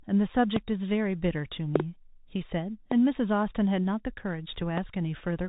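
Bluetooth CVSD headset codec, present from start to finish: the speech passes through a narrowband headset link, with the sound consistent with one-bit delta coding at 64 kbps. Nothing above 4 kHz comes through, so the speech sounds boxed-in. The adaptive step size cannot keep pace with loud, bright moments, which smear and distort. Sibilants turn scratchy, and a grainy hiss sits under the speech throughout. The damage is plainly audible.

Loud pops occur at 0.56 to 0.58 s, as a double pop from 1.76 to 1.82 s, at 2.91 to 2.94 s, and at 4.78 to 4.80 s. Each is a sharp transient roughly 20 dB above the speech, with the talking continuing underneath. The likely cause is a voltage step or spike from a switch, static discharge or driver glitch, shaped by the circuitry that follows into a brief click or thump.

Bluetooth headset packet repeated at 4.61 s: a single voice packet of about 3.8 ms was lost between headset and phone. 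The chip filled the gap by decoding the previous packet's bits a second time. Because only one packet went missing, no buzz builds up. The fault is heard as a small, brief tick just before the last pop.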